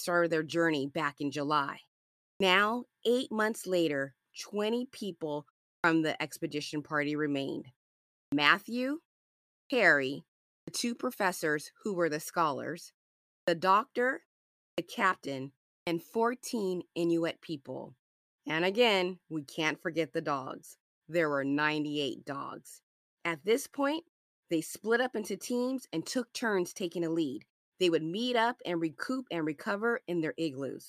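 At 2.35, 5.78, 8.26, 9.65, 10.62, 13.42, 14.72 and 15.81 s the speech shows a clipped start after a pause. Each time, the output path drops into a low-power state during a gap of 0.32 to 0.67 s and has not fully resumed when the next phrase begins. The first 52 to 63 ms is lost, so each phrase starts abruptly out of silence with its opening sounds cut away.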